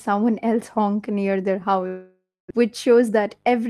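At 1.87 s the speech cuts out and a buzzy continuation of the last sound takes over, fading away until it's just silence for roughly the final 240 ms of the gap. Real audio returns at 2.52 s, but about 600 ms of it never comes back, so the speech jumps ahead. That whole 630 ms patch of smeared fill and quiet is the classic sound of a long network dropout, with the receiver likely concealing a stretch of packets that never arrived.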